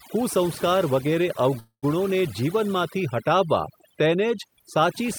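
Overdone noise removal runs through the whole speech clip. The suppression was set so aggressively that individual frequency bands near the noise floor are pulled down or cut, taking quieter parts of the voice with them. The background drops and breaks up into twinkling specks.

From 1.59 to 1.85 s there is a call audio freeze, likely caused by delayed packets draining the jitter buffer. The receiver stretches the last sound into a fading buzz or hiss, with about 110 ms falling silent. The audio then resumes where it stopped, so nothing is lost, but everything after is delayed about 232 ms.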